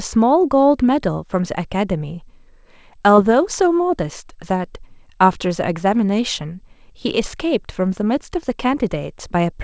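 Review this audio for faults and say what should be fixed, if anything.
Short concealed packet loss occurs at 3.16 to 3.19 s. About 20 ms of speech reached the decoder too late. The receiver continued the preceding sound for 15 ms, then blended back into the real audio, leaving a brief smear. A deeper jitter buffer or forward error correction would prevent it.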